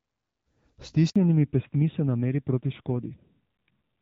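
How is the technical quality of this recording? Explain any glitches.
The recording has two linked faults at about 1.1 s: a short dropout followed by a permanent loss of bandwidth. Before that point the speech comes through the AMR wideband (HD Voice) codec with only light coding damage, which fits a rate of about 12.65 kbit/s.

From 1.10 to 1.16 s there is a handover gap lasting 60 ms. The call was passed from one network link to another, and no speech frames were delivered while the switch happened. The sound fades out within a few tens of milliseconds and stays silent until the new link begins carrying audio, so whatever was said in that window is simply missing.

From 1.16 s to the end of the clip there is a fallback to narrowband. When the call resumed on the new link, it came back on the older narrowband codec rather than HD Voice, which is consistent with AMR-NB at around 7.4 kbit/s. 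That codec carries nothing above 4 kHz. The speech therefore loses its upper frequencies from this point on, so it sounds duller and more muffled, with a coarser, rougher texture than the first second of the clip.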